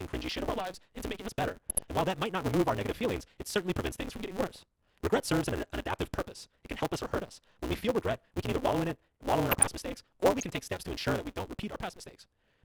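From the first moment to the end, the speech carries a block size mismatch (truncated) fault. One stage writes longer blocks than the next stage reads, so the tail of every block is discarded. This gives a steady buzz at 188 Hz and speech running 1.88 times too fast while keeping roughly its normal pitch, which fits a 256-sample read block. On a spectrogram, regular vertical seams repeat at 188 Hz. On the waveform, small discontinuities appear at each block boundary.

DAB burbling then appears five times. The first is from 0.45 to 0.51 s, between "cringy shit" and "lives into making us". The second is from 1.69 to 1.84 s, just after "into making us better". The third is at 4.54 to 4.56 s, after "prevents things from getting". The last two are from 9.47 to 9.67 s and from 10.39 to 10.42 s. Bit errors under about one percent slipped past the error correction into the MP2 data, so wrong samples put short blips of noise into single sub-bands. 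A spectrogram shows them as isolated bright rectangular patches, each short and confined to narrow bands.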